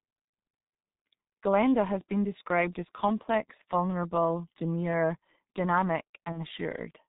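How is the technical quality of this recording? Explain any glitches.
The recording has poor technical quality, with heavy low-bitrate codec damage throughout and one brief dropout near the end.

The G.723.1 codec damage runs through the whole speech clip. The audio is band-limited below 4 kHz, which leaves it muffled and hoarse, and consonants are smeared because the coder encodes in 30 ms frames and updates its vocal-tract model slowly. The heavy degradation fits a bitrate of about 6.3 kbit/s. Simple low-pass filtering would only dull the sound, but this roughness points to parametric coding.

The VoIP packet loss concealed by the speech codec occurs from 6.32 to 6.39 s. The decoder lost about 30 ms, which fits a single missing frame. It filled the gap by extrapolating its last pitch and filter settings at falling gain, so the sound turns into a short buzzy tone or coloured noise that fades rather than silence. 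A plain dropout or click would not sound like this. The distortion lingers briefly after the gap because each frame depends on the previous one.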